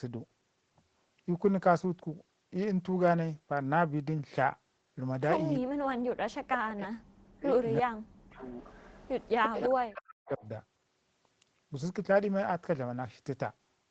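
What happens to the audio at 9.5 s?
At 9.5 s the clip is inside an echo leak that runs from 8.49 to 9.62 s. A delayed copy of the speech, trailing it by about 341 ms and sitting roughly 10 dB below it, can be heard under the direct sound. The likely cause is a far end listening on a loudspeaker whose echo canceller let part of the microphone pickup through, so that residue was sent back into the call.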